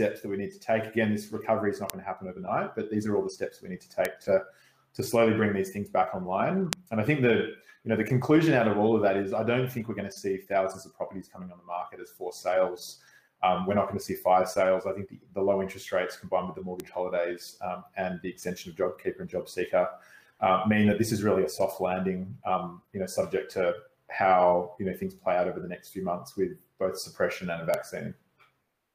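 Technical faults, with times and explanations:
1.90, 4.05, 6.73, 16.8 and 27.74 s: bit error spikes. A flipped bit throws single samples (a few consecutive ones at 6.73 s) to peaks of about 0, -6, 0, -12 and -6 dBFS, heard as isolated broadband ticks unrelated to the sound.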